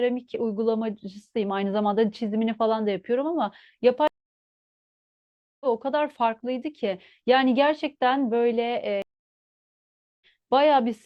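At 4.08 s the speech falls silent for 1.53 s in a stream reconnect, resuming around a second further on. Another follows at 9.02 s, with 1.19 s of silence and a skip of a fraction of a second. Unlike a plain dropout, the restarted stream jumps ahead, so material is lost.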